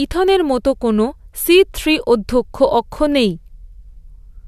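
No technical faults are audible.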